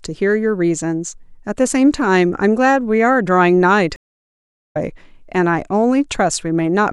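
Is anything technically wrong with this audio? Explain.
Yes, there's a stream reconnect at 3.96 s. The speech drops out for about 790 ms until 4.77 s while the player re-establishes the connection and starts a fresh decoder. It picks up roughly 0.7 s further along, so a bit of speech is skipped.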